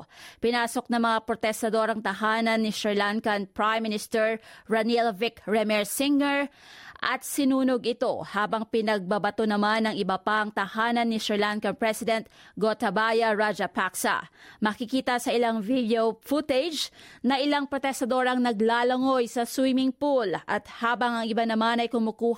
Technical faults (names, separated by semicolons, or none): none